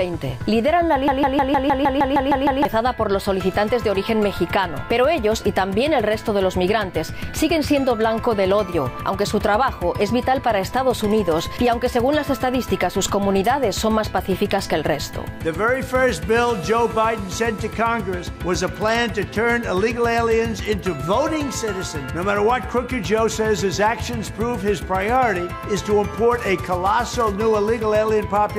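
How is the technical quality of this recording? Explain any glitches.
One glitch mars the recording. From 1.08 to 2.65 s, a broken-record loop: a stall likely resent the last 155 ms fragment ten times over, replacing the audio due there.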